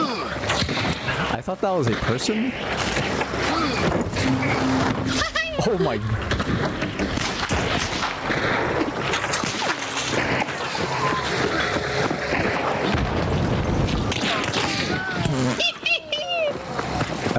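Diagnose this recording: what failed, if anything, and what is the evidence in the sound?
Gain pumping, likely excessive input gain driving a fast limiter: the gain swings roughly 20 dB, pulled down on each loud sound. The waveform looks squashed and the spectrogram stops at the G.722 8 kHz ceiling.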